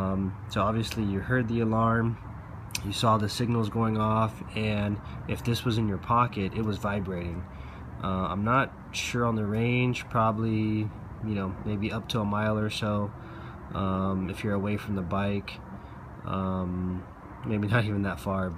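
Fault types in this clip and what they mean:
No faults can be heard.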